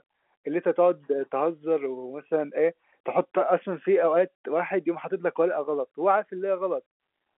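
Nothing stood out on listening to this telephone-band speech, carried over G.711 mu-law coding with its usual ceiling a little below 4 kHz.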